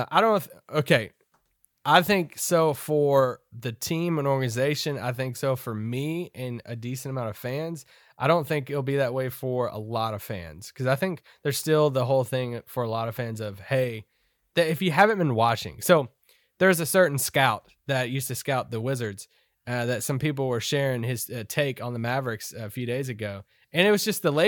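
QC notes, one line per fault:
No faults found.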